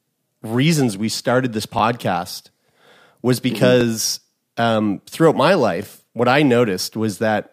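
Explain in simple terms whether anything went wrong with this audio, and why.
Something did go wrong: overlapping chunks. The speech was handled in 2-second pieces, and each piece began 20 ms before the previous one ended. That tiny bit plays twice, causing a brief stutter at 1.79 s after "reasons we started this", at 3.81 s, and at 5.83 s between "um throughout my" and "what i".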